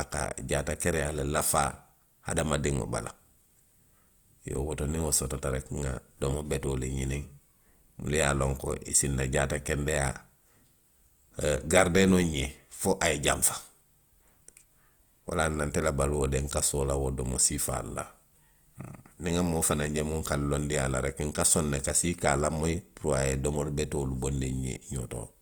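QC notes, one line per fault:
Throughout: Opus compression is the likely cause of a plainly audible roughness across the speech. The bandwidth stays full, with content reaching up to 20 kHz, but the upper bands sound grainy and noisy rather than hollow or swirling. That texture fits the codec's music (CELT) mode at a low rate, around 24 kbps: each band keeps its energy, while the detail inside starved bands is rebuilt from folded lower bands or noise.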